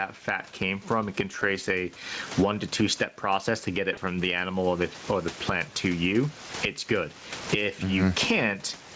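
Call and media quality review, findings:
Gain pumping, whole clip: about 20 dB of swing, level squashed flat. Likely cause: input gain set far too high, with a fast limiter/compressor clamping every peak.

VoIP packet loss concealed by the speech codec, three events. At 1.39–1.43 s, between "came from it can" and "a one to two": brief stretched smear. At 3.93–3.99 s, after "step process to get", before "from the animal or": longer stretched sound fading out. At 6.47–6.52 s, after "the plant to you": the same. Decoder extrapolating its last pitch and filter with decaying gain, which fits one, two and one lost 20 ms frames. Voice stays weak briefly after each gap. Speex coding holds up; nothing above 8 kHz after the call's microphone processing.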